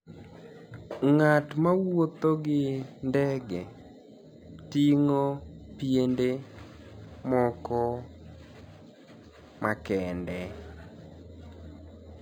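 Throughout the speech, imaging from linear upsampling is present: straight-line interpolation, consistent with 11 kHz audio raised to 44.1 kHz, dulls the top and leaves a faint mirrored copy between 5.5 kHz and 11 kHz, roughly 35 dB down. It's heard as a light metallic shimmer on sibilants, and on a spectrogram it appears as a weak reflected band above 5.5 kHz.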